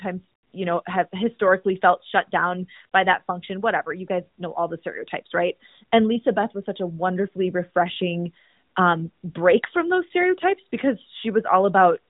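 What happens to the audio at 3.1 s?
Nothing goes wrong at 3.1 s: the speech carries on intact there, passing through the AMR narrowband mobile codec as it does throughout, with no dropout, click or other fault at that moment.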